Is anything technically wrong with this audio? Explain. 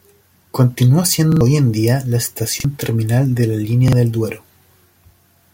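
Yes, there are repeated buffers at 1.32 s (played twice extra), 2.60 s and 3.88 s: late data made playback loop a 43 ms chunk, fitting a 2048-sample buffer, giving hard-edged stutters.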